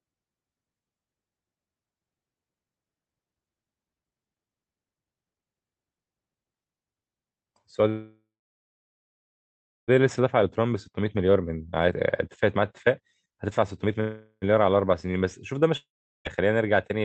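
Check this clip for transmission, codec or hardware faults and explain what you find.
Yes, there are faults: two call audio freezes, two stretches of jitter buffer speed-up, and one long network dropout. The sound comes through a call codec path whose spectrum stops near 8 kHz.

Call audio freeze, 7.89–9.90 s and 14.00–14.44 s. The first freeze lasts about 2.0 s. The last sound is stretched into a buzzy tail that fades, followed by about 1.6 s of silence. The likely cause is delayed packets emptying the jitter buffer. Playback then resumes where it stopped, so nothing is lost. On a spectrogram this shows as smeared, fading bands and then a blank column. The second freeze, about 0.4 s, is almost entirely a fading buzz with only a brief silence.

Jitter buffer speed-up, 10.06–11.93 s and 12.59–14.00 s. After the first freeze the buffer holds excess audio, so the receiver repeatedly cuts out short pitch-period slices. 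Playback runs about 18% fast, removing roughly 0.4 s and 0.3 s. The result sounds hurried at unchanged pitch. Harmonic spacing stays the same, but syllables look compressed in time.

Long network dropout, 15.77–16.27 s. For about half a second, most likely lost packets, the audio is replaced by a short fading buzz and then about 0.39 s of silence. When the audio returns, roughly 0.48 s is gone for good. The waveform collapses to flat and picks up mid-stream.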